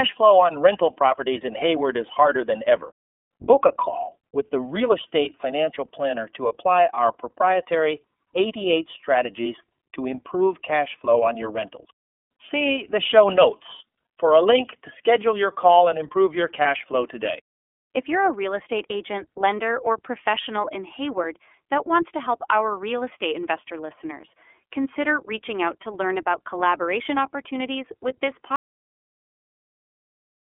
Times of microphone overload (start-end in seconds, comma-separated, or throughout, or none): none